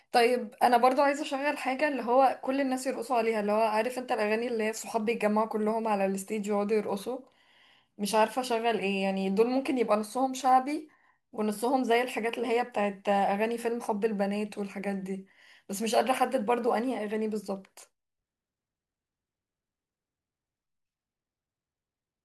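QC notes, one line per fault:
No fault found; nothing to log in these QC notes.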